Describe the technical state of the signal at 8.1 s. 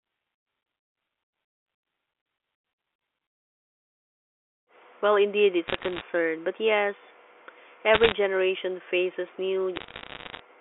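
At 8.1 s you're inside a burst of bit errors on the digital phone line, running 7.94 to 8.12 s, just before "generation faces". Flipped bits, around one or two in a hundred, knock single samples, giving sharp ticking crackle over otherwise-intact speech.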